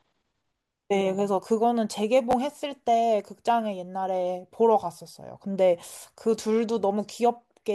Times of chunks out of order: 2.31-2.33

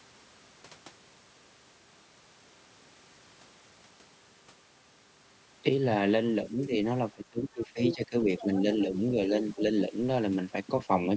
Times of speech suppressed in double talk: 6.50-6.72, 7.14-8.49, 9.28-9.61

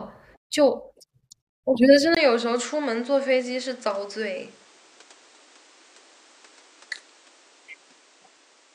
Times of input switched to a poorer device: 2.15-8.74

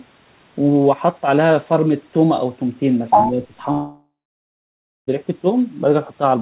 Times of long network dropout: 3.72-5.09

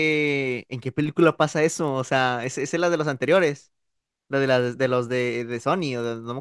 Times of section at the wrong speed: none

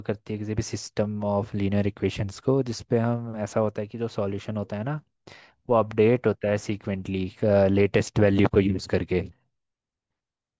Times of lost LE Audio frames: none

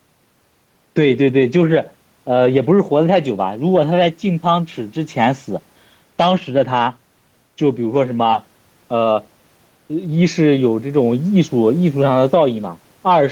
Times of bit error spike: none

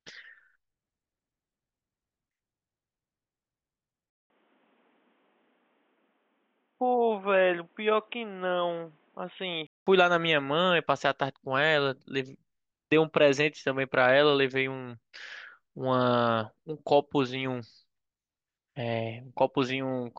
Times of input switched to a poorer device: 4.10-9.87

